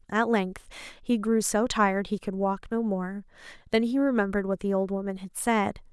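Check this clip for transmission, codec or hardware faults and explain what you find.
Nothing here calls for comment; the speech comes through without any transmission, codec or hardware trouble to point to.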